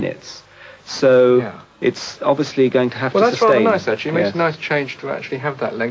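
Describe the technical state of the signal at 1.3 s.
At 1.3 s the audio is intact, with only the normal band limits of call microphone processing audible: the lowest bass is trimmed and nothing reaches above 8 kHz.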